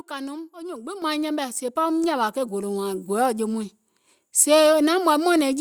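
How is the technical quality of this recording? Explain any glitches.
The speech has two abrupt level jumps caused by the microphone volume being stepped up. At 1.02 s the level rises by about 8 dB, and at 2.04 s it rises again by about 3 dB. Each time, the capture software judged the microphone too quiet and raised the device's input gain in one step. Because the gain is applied before any processing, the voice and the background noise floor jump up together, with no gradual ramp.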